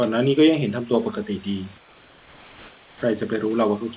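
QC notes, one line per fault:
1.78–3.02 s, comfort noise in place of the background: the real room background gives way to steady, featureless hiss about 4 dB quieter, likely from discontinuous transmission; the spectrogram shows a smooth, textureless band.
2.99–3.02 s, onset clipped by the voice detector: the first 30 ms of returning sound are missing, likely from slow voice detection; the waveform jumps straight from the noise floor into the sound with no soft beginning.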